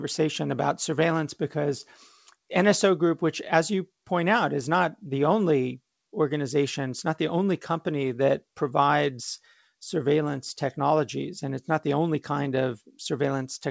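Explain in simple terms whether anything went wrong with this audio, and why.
Nothing went wrong here, and no fault can be heard anywhere in the recording. It came through an ordinary internet call line using the G.722 codec, which carries nothing above 8 kHz, so the very highest, airiest sounds are missing, and that is just how this kind of call connection normally works.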